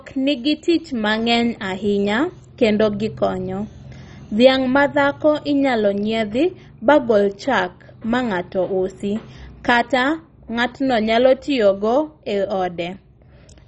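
Speech throughout the clip has likely been through heavy MP2 compression at a rate that points to about 32 kbps. Starved sub-bands drop out, leaving nothing above 10.3 kHz, and the surviving bands are coarsely quantised, giving a dull, gurgling, granular sound.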